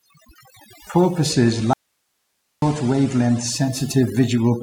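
Overdone noise removal runs through the whole clip. The reduction is set so hard that frequency bands near the estimated noise floor are pulled almost to nothing, taking the softer parts of the speech with them. Between phrases the background sits in near silence speckled with twinkling artefacts. That watery, swirling residue is what marks it as aggressive spectral gating rather than a simple low-pass or a gate that mutes everything at once.

At 0.90 s, digital radio blending to analogue begins. The receiver loses its digital stream and cross-fades over about half a second to the FM broadcast of the same station. A faint hiss comes up well below the speech, and the level drops by about 2 dB. The cross-fade and the rise in hiss together separate this from an ordinary dropout or a codec switch.

From 1.73 s to 2.62 s comes an audio dropout to a faint residue. The speech cuts out abruptly for about 0.89 s, leaving only hiss far below the normal level, then snaps back mid-flow. 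The hard edges and the live hiss in the gap distinguish it from a pause or a fade. The likely cause is the analogue signal itself being lost for that stretch while the path after it kept running.

At 3.91 s the receiver blends back to digital, and the hiss recedes.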